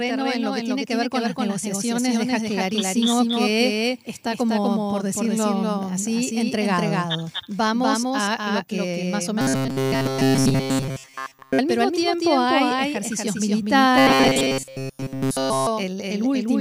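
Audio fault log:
throughout – doubled audio track: a dry full-band copy about 5 dB quieter trails roughly 200 ms behind, likely a second capture path; every waveform onset appears twice.
9.41–11.59 s (after "lo que más o", before "al mismo tiempo") and 13.98–15.67 s – robotic sound from repeated short buffers: a 7.5 ms slice loops almost continuously, likely from audio arriving too seldom, forcing a metallic 133 Hz buzz; the spectrogram shows rigid, evenly spaced harmonic lines.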